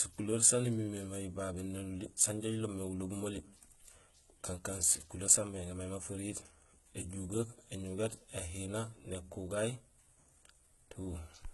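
The speech carries gritty, metallic sibilance and lispy s sounds throughout, with nothing above about 11.8 kHz, which points to heavy HE-AAC compression, likely at a very low bitrate.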